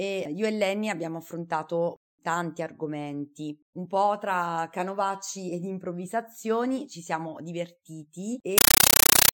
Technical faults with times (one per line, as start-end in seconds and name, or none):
8.58-9.33 compressed stream played as audio